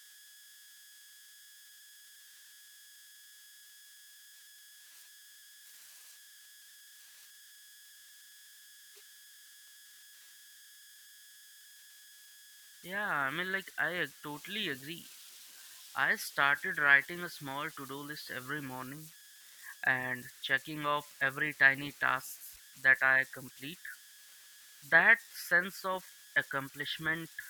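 A whistle near 1.5 kHz, with a grainy hiss beneath the quieter stretches, runs through this speech recording from start to finish, sitting about 23 dB below the signal. These are converter idle tones: an undithered delta-sigma converter falls into repeating bit patterns on small inputs, producing an offset-dependent tone.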